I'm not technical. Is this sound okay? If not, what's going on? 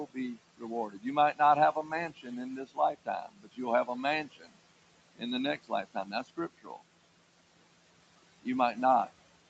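No. Noise suppressor artifacts run through the whole clip. A call's noise filter keeps turning down the background hiss in each moment it judges to be noise, so the hiss drops away in the gaps between words and comes back underneath them, and the background keeps shifting.

Speech cut by the noise suppressor happens in four stretches: 0.06 to 1.39 s, 1.73 to 3.88 s, 4.25 to 4.57 s and 5.58 to 6.82 s. In each, the filter mistook bits of quiet speech for noise and lowered them, so parts of words sound swallowed or faint.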